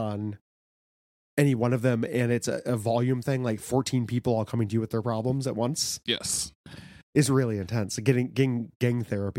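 A speech recording with no technical faults present.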